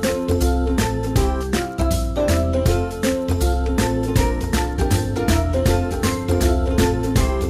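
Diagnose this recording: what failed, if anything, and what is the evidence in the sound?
From 4.14 s to the end, a second copy of the sound runs about a second behind the original, roughly 5 dB quieter, full-band and dry, cutting in abruptly: a doubled audio track. Likely cause: a slower second capture path or editing overlap.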